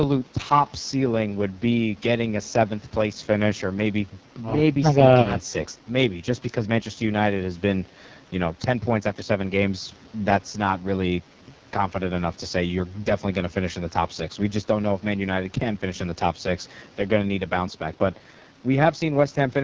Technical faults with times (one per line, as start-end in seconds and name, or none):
0.00-19.63 AMR wideband (HD Voice) codec